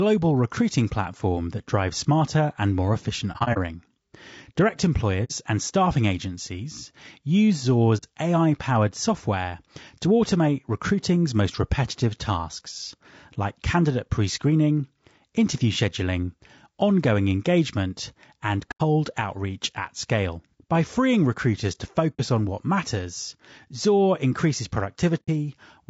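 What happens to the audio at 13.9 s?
At 13.9 s the speech carries the same plainly audible damage heard across the whole clip, likely from low-delay AAC compression of the AAC-ELD kind used in video calls. The voice sounds rough and grainy, with noise filling the gaps between harmonics and a thin or synthetic-sounding top band. The codec codes about 500 frequency lines a frame with a low-delay window, and the sparse detail points to a low bitrate of around 32 kbps.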